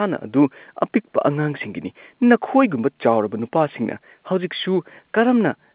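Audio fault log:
Nothing wrong turns up anywhere in this speech, which just sounds like an ordinary telephone-band recording.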